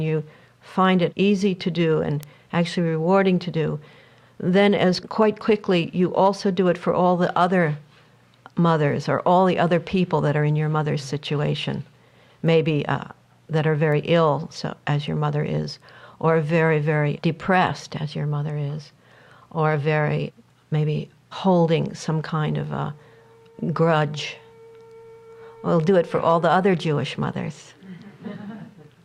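Three bit error spikes occur in the audio, at 2.23, 12.47 and 13.92 s: each is a single corrupted sample, a lone sharp tick. Unlike a dropout click, no audio goes missing; the waveform jumps and returns immediately.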